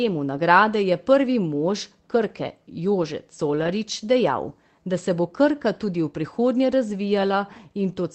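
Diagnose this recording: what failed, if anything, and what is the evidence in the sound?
From 3.55 to 3.69 s the speech turns briefly rough and grainy, with added noise, yet nothing drops out. This is a lost packet rebuilt from error correction, a network-stage fault: roughly 80 ms of audio, which fits about four 20 ms packets, went missing in transit. The Opus decoder in the call path filled the hole with the low-bitrate copy carried in each following packet, so continuity survives but that stretch is coded more coarsely.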